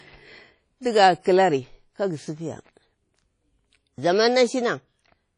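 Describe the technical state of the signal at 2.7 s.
At 2.7 s, like everywhere else, the speech carries WMA compression, likely at around 32 kbps: nothing above 10 kHz, and a washy, ringing hiss breathing with it.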